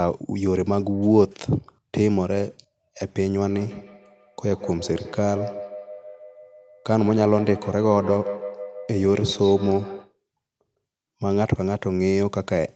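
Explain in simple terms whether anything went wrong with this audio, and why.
Two devices in the same room were on one call, and one played out what the other's microphone sent. That microphone picked the sound up again, and neither device's echo canceller could remove sound coming from the other. This is a feedback echo between two devices. From 3.47 to 10.15 seconds, the speech comes back roughly every 0.15 seconds, each repeat thinner and more ringing than the one before.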